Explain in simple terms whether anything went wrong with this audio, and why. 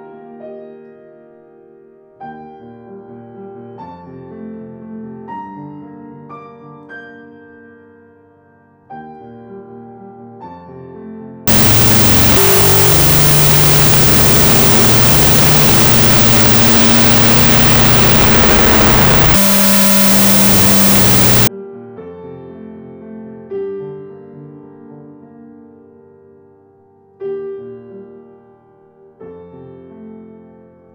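From 11.47 to 21.47 s, loud hiss swamps the sound, which plays at half speed and lower pitch: a wrong sample width fault, 16-bit data read as 8-bit.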